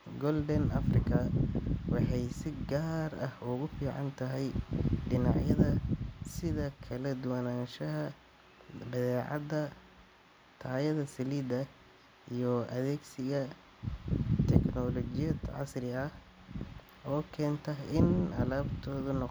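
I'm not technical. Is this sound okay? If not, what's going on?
Yes, it sounds fine.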